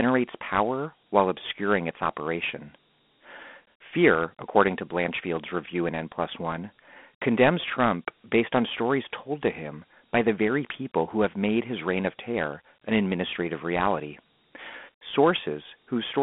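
From start to finish the speech carries Dialogic VOX ADPCM coding: 4-bit adaptive steps leave a plainly audible gritty hiss trailing the voice, consistent with 32 kbps. The band is telephone-narrow, about 200 Hz to 3.4 kHz, with nothing above 3.8 kHz.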